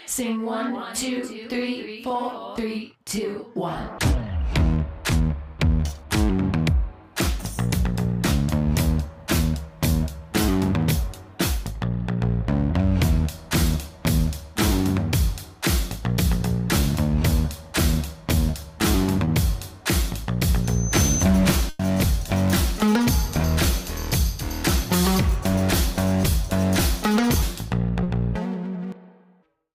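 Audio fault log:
18.51–18.55, 19.25–19.29 and 28.03–28.07 s, short concealed packet loss: each time about 20 ms of audio arrived too late for the decoder, so the receiver extended the preceding sound to cover the gap, then blended back in. Each is a brief smear or wobble.
20.64–21.26 s, loudspeaker feedback squeal: the microphone picked up its own loudspeaker, and the loop gain rose above one at 6.1 kHz. That tone grows over roughly 0.4 s into a thin, piercing whistle about as loud as the programme itself.
21.69–21.81 s, burst of packet loss: about 100 ms of consecutive audio never arrived in time, and the receiver filled the whole gap by continuing and fading the last sound, with no silence. It is heard as a held buzz or fading hiss, after which the sound resumes with that stretch missing.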